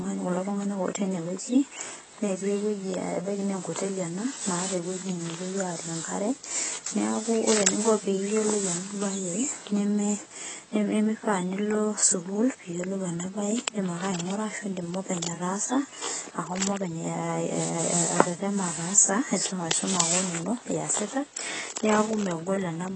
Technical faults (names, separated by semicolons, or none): AAC compression